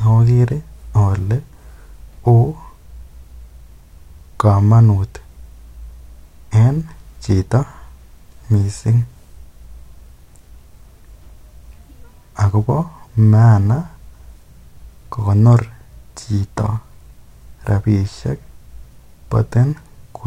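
No technical faults are audible anywhere in the speech.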